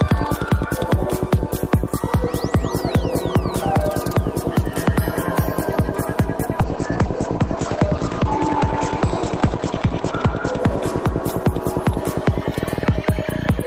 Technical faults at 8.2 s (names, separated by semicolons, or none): call bitrate drop